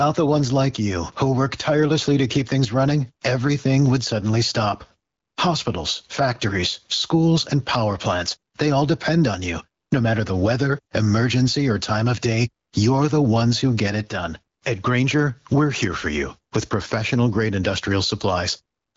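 Gain pumping runs through the whole speech clip. The level breathes constantly. The swing is around 15 dB. Loud and quiet passages sit close together, so the sound feels squashed and flat. The likely cause is input gain set far too high, with a fast limiter clamping each loud sound. The HD Voice band itself stops near 7.5 kHz and stays clear.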